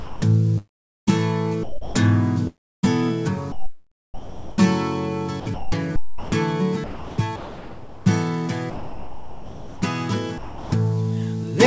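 From 0.00 to 1.11 s the sound is chopped by the voice detector. Pieces of it vanish, and about 0.71 s in total is replaced by synthetic comfort noise. The likely cause is the sender's voice detector switching on and off, judging quiet parts to be background.

At 1.63 to 1.95 s the sound is dropped by the voice detector. It gives way to steady noise for 0.32 s, then returns.

From 2.47 to 4.58 s the chopping returns. About 1.4 s is filled with comfort noise.

From 5.40 to 6.32 s it happens again, with about 0.6 s replaced.

From 6.84 to 8.06 s about 1.04 s is swapped out. The sound stutters.

From 8.70 to 9.82 s the sound is dropped for about 1.1 s. Here the detector likely read ongoing sound as background and stopped sending. Flat noise sits in its place.

At 10.38 to 10.72 s a final drop lasts 0.34 s.

Throughout, nothing reaches above 8 kHz. This fits a wideband call codec such as G.722.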